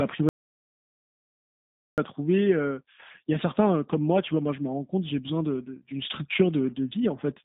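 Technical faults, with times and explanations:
Throughout: G.729 codec. Sound is confined to roughly 200 Hz to 3.7 kHz, with nothing above 3.8 kHz. The rough, buzzy texture, not just dullness, fits an 8 kbit/s pulse-excited coder.
0.29 to 1.98 s: audio dropout to silence. About 1.69 s drops to silence with no room tone, unlike a natural pause, likely from lost input.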